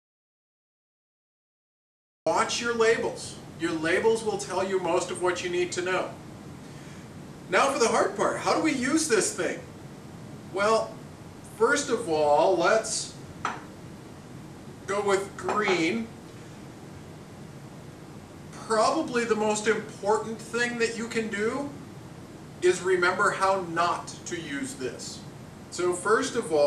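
The audio opens in dead digital silence with no room tone until about 2.26 s, when sound cuts in mid-flow: an audio dropout to silence, likely from a lost input that was written as silence.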